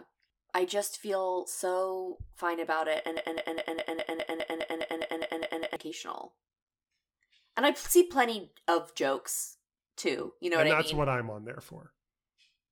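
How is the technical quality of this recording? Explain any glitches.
The recording has one clear glitch. From 3.17 to 5.76 s the speech sticks in a broken-record loop: a 0.21-second fragment repeats exactly, back to back, 13 times. The likely cause is a stalled player or stream resending its last buffer, so that stretch of speech is lost.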